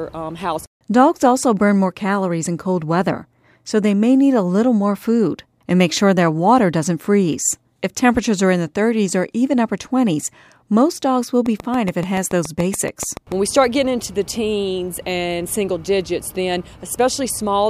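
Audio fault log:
11.46–13.33 s, train of clicks: a run of about fifteen near-identical sharp pulses arrives at a steady 7 per second for just under 2 s, heard as a regular ticking laid over the sound and not part of it. The clicks peak at about 10 dB above the surrounding audio, so they stand out clearly. The even spacing and uniform shape point to a likely cause in electrical interference from nearby equipment or a faulty connection or power supply injecting pulses.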